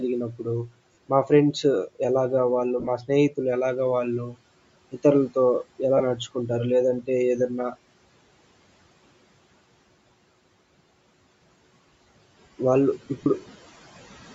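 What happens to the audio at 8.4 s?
At 8.4 s the speech carries on intact, with no dropout, click, distortion or other fault at that moment.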